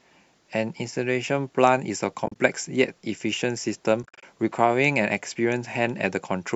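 At 2.26 to 2.36 s and 4.03 to 4.23 s, AAC frame loss with muting leaves scattered soft-edged holes in the speech. Zeroed frames fade out and back in through overlapping windows, with gaps of about 40 and 50 ms. A spectrogram shows blank vertical bands, and the waveform shows tapered dips.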